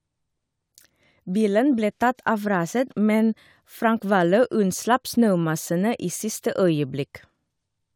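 Nothing in this short speech recording stood out as a technical problem on listening.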